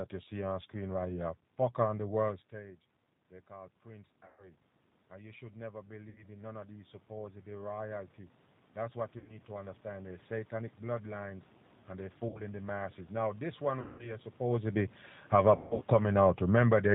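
The whole clip runs through a G.729 codec at 8 kbit/s, so nothing above 4 kHz survives and the speech has that rough, slightly synthetic edge. Right after "on the world", at 2.51 s, automatic gain rising kicks in: the talker drops back just before then, so the AGC slowly pulls voice and room noise up together by about 15 dB until 14.33 s. Along the way there's VoIP packet loss concealed by the speech codec at 4.26, 6.09, 9.18, 12.29, 13.81 and 15.56 s, with gaps of 120, 60, 90, 60, 180 and 210 ms. The decoder stretches the last sound into a fading buzzy tone or coloured noise, and it stays weak for a moment afterwards. From 14.4 s to 16.74 s, automatic gain falling brings everything back down by about 7 dB, as the talker is louder again.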